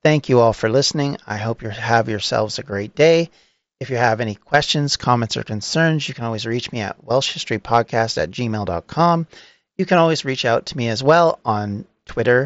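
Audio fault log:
No faults: the speech shows the normal character of the Bluetooth mSBC headset codec, with nothing above about 7.7 kHz and only the light coding grain that path leaves.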